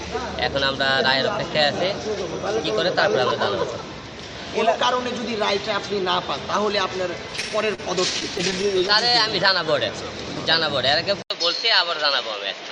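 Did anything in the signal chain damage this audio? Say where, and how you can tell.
Yes. Between 7.31 and 7.8 s, then 8.2 to 9.14 s, there are repeated stalls (stutter). That's a network problem: packets arrived late, the jitter buffer kept running dry, and the receiver stretched the last sound across short gaps, the longest about 34 ms. Nothing's lost, it just drags.

At 11.22 s there's a silence of 80 ms, and then the sound goes dull to the end, with a new noise floor roughly 50 dB down, and the level about the same. Most likely the input switched to a poorer device.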